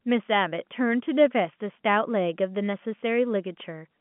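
No technical fault can be heard in the speech; it comes through an ordinary G.711 telephone coding path at 64 kbps, which limits it to the telephone band of about 150 Hz to 3.4 kHz.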